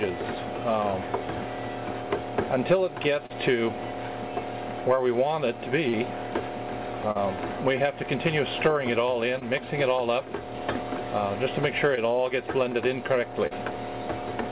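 Audio carried over a call path with nothing above 4 kHz, which fits G.711 A-law at 64 kbps, has short concealed packet loss at 3.26, 4.96, 5.89, 7.11, 9.39, 11.95 and 13.47 s. Each 20 or 40 ms hole was filled by extending the preceding sound, so it smears or wobbles rather than dropping to silence.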